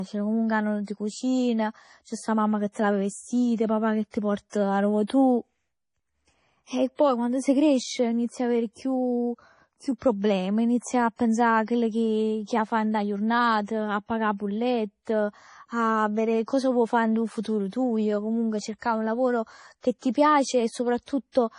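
Throughout, the speech sounds watery and swirly. The spectrogram shows a hard ceiling at 10.5 kHz with flickering holes below it, likely from heavy MP3 compression at a low bitrate near 32 kbps. Pre-echo, a short hiss smeared ahead of sharp attacks, appears at 0.84, 2.72, 4.10 and 5.07 s. Each lasts about 28 to 36 ms and shows as broadband noise just before the onset in the waveform.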